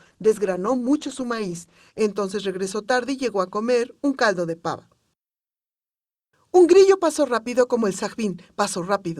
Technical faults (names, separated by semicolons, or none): adaptive stream starting at a low bitrate